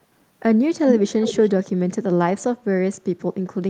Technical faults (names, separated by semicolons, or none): echo leak